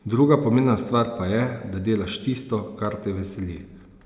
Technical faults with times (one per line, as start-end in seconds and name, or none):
none